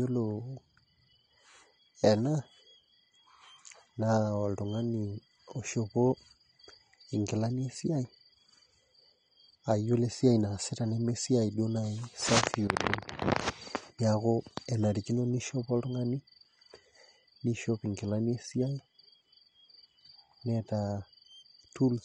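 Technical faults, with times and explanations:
Throughout, AAC compression: the speech is dull and smeared, with a warbling, fizzy texture on sustained vowels and sibilants, because the codec likely quantised the spectrum coarsely against a hearing model, which fits a low bitrate around 32 kbps. A spectrogram shows a flat ceiling with nothing above 9.6 kHz, and patchy holes and noisy blotches in the upper bands that flicker from frame to frame. The waveform looks ordinary.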